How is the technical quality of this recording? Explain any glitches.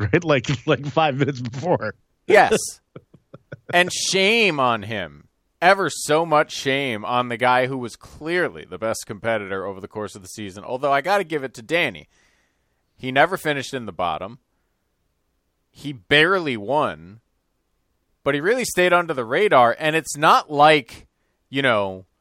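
Nothing in this speech recording stands out as a technical problem, so there are no glitches to explain.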